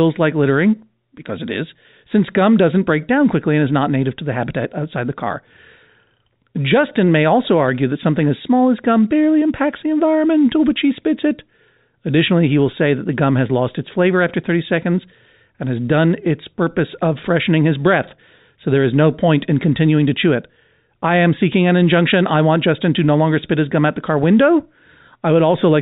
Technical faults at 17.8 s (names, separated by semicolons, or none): none